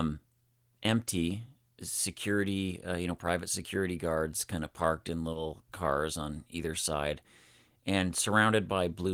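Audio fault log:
5.33–5.37 s, short concealed packet loss: Between "kind of parked in" and "cars on either side", about 20 ms of the call arrived too late for the decoder. The receiver covered the gap by extending the preceding sound, continuing its pitch if voiced or generating shaped noise if not, and then crossfaded back into the real signal. This produces a brief smear or wobble at the joint, where 20 ms of genuine audio is replaced.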